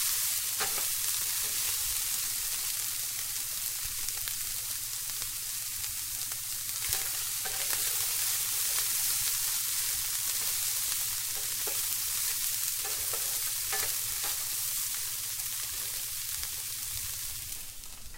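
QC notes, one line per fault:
No faults heard anywhere in these sounds.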